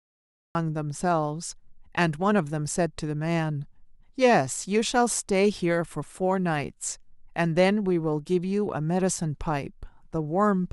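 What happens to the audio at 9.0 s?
Nothing goes wrong at 9.0 s: the speech there runs on intact, with no dropout, click, distortion or other fault.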